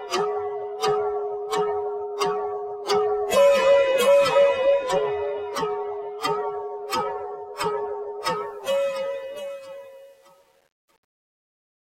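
An everyday-sound recording whose fade-out, starting at around 8.35 s and ending at 11.8 s, carries truncation distortion on a fade from 8.35 s onward. The gain stage keeps too few bits and adds no dither, which fits roughly 9-bit resolution. From 9.14 s to 11.81 s the waveform collapses into coarse steps, so the tail turns gritty. Unlike gating or dropouts, the grit grows steadily as the level falls.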